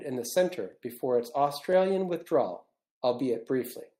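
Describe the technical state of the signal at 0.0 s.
At 0.0 s the signal is intact, with no fault present at that moment.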